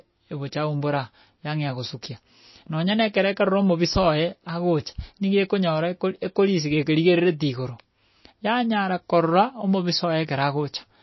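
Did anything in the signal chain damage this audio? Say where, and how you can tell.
Yes, likely MP3 compression at the codec stage: treble stops dead at 5.8 kHz throughout, with watery swirling a plain low-pass filter wouldn't cause, fitting roughly 24 kbps.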